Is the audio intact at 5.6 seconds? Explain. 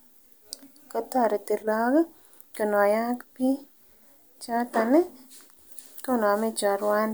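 Yes, the speech at 5.6 seconds plays through intact, with no audible dropout, glitch or distortion at that moment.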